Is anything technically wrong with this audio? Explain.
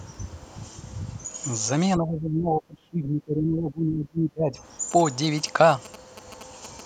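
Yes, there are two faults.

From 1.97 to 4.59 s the speech dips, thins and drops out in fragments, at its deepest by around 30 dB. This is likely speech suppressed in double talk: with both ends talking, the echo canceller mistook this voice for echo and attenuated it.

From 4.91 to 6.81 s a galloping dit-dit-dit of short buzzes sits roughly 15 dB below the speech. These are GSM signalling bursts: a nearby 2G phone's radio bursts, repeating at 217 Hz, are rectified by the audio circuitry into audible interference.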